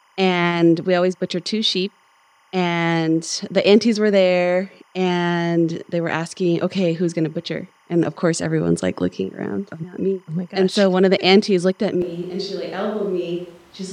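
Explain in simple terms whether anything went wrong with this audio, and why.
Timecode bleed: a timecode signal running at 25 frames per second leaked into the recording from a nearby track or cable. Throughout the clip it adds a steady chirping warble behind the speech, flipping between roughly 1 kHz and 2 kHz, well below the speech in level.

The recording likely made a switch to a distant microphone, such as a camera's, in place of the close one, at 12.02 s, right after "the aunties looked at". From there to the end the speech sounds suddenly roomy and hollow, somewhat quieter, with more background noise.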